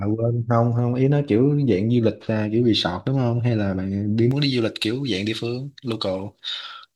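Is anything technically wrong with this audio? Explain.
Yes. From 4.31 s to the end at 6.96 s, the speech turns thin, bright and sibilant, with the treble about 11 dB stronger at 10 kHz than at 1 kHz. This is pre-emphasis left on: the treble lift, consistent with a J.17 curve, was never followed by its matching de-emphasis cut.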